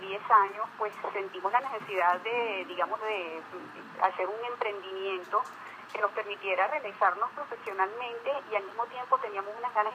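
No audible dropouts, glitches, level jumps or pitch errors turn up anywhere in the audio.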